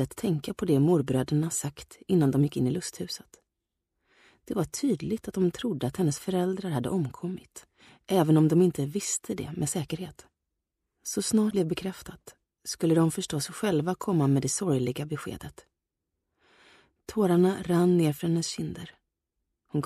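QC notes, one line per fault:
11.48–11.53 s, damaged data in a compressed stream. A brief glitch cuts through the sound for about 40 ms. Corrupted bytes reach the decoder there. It misreads those frames, loses sync, and outputs garbled audio until it locks onto the next valid frame header.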